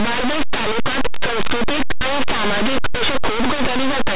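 Linear audio read as companded: speech stored as plain linear 8-bit samples is decoded as if each byte were a mu-law code, for the whole clip. Mu-law expansion maps small byte values just on one side of zero to the largest outputs, while those on the other side stay near silence. Low-level samples in quiet passages and pauses therefore jump to the largest outputs whenever they fall on that side of zero, and the speech is heard through very loud, harsh distortion from start to finish.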